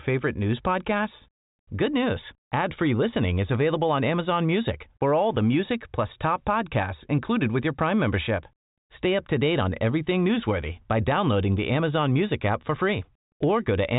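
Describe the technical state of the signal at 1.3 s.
At 1.3 s the speech is intact, with no fault present; it passes through a G.726 ADPCM path running normally at 40 kbit/s, so the band stops around 3.8 kHz as that telephone codec does.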